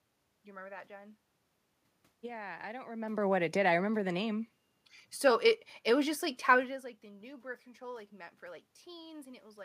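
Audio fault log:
Nothing to log here, as the room noise behind the speech and the changes in level at about 3 and 6.5 seconds, where the talker shifts position relative to the microphone, are simply part of the recording rather than anything the system did.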